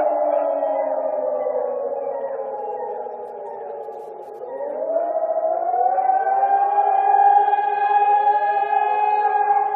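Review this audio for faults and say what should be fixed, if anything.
Repeated frames stutter the audio from 5.17 to 5.45 s: a block of about 70 ms, consistent with a run of three compressed frames, plays four extra times and adds about 0.28 s to the clip. Unlike a dropout, nothing is lost or silenced; the same material loops. To prevent it, the writer or transport should check frame sequence numbers and discard duplicates before decoding.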